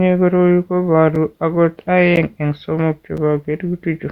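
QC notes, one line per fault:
1.15 s, 2.16 s, 3.17 s: gap between stream segments. Short, hard-edged dropouts to silence of about 6, 12 and 6 ms, spaced roughly a second apart, right where 1-second segments join. The timestamps leave a sliver of time that the player fills with silence, so nothing of the speech is lost.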